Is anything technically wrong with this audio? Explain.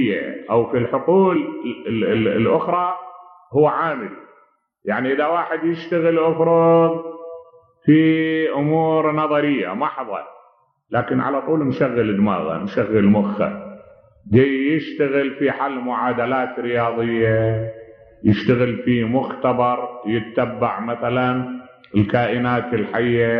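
Yes, there's one glitch: compressed frames skipped at about 1.35 s. A few frames of the encoded stream never got played, either missing from the file or thrown out by the decoder as damaged. The frames here are 23.2 ms long, and roughly three went missing, so the audio jumps ahead around 70 ms. At the join, the sound lurches forward.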